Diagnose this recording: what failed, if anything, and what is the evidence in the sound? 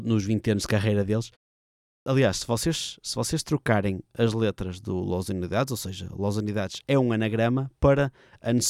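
Clipped start after a pause, 1.80 to 2.06 s: after "anos de carreira deles" and a 0.52 s gap, about 260 ms of speech is lost before "aliás se vocês se". The playback device slept during the silence and woke too late to reproduce the onset.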